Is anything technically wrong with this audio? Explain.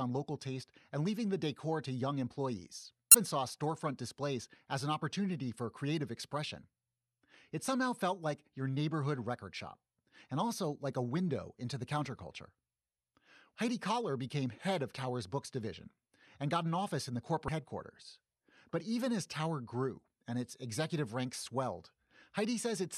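Yes. There is damaged data in a compressed stream at 3.11 to 3.15 s and again at 17.45 to 17.49 s, each lasting under 40 ms. At both points part of the encoded speech is wrong, so the decoder misreads or throws out the affected frames and loses sync while it searches for the next valid frame header. The result is a brief chirp, squawk, click or short hole cutting across the speech.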